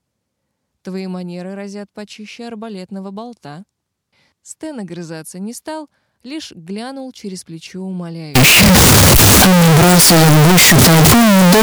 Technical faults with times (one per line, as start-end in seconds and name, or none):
8.35-11.63 signed and unsigned mixed up